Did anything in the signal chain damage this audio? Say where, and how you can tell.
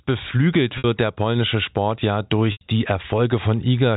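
Yes, in the network: packet loss with pitch repetition at 0.78–0.84 s, before "der polnische", and at 2.52–2.61 s. A held, buzzy pitch fades out instead of cutting to silent dropout.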